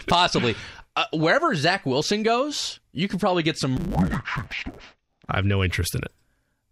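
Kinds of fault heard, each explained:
Interleaved audio read as planar: from about 3.77 s to 5.27 s the speech turns dull and robotic with a steady buzz. Each 10 ms block of alternating left and right samples is being split down the middle, first half taken as left and second half as right, so both channels play each half at half speed while the overall timing holds. With blocks this short there is no clear octave drop. Instead the block boundaries repeat at 100 Hz and produce the buzz.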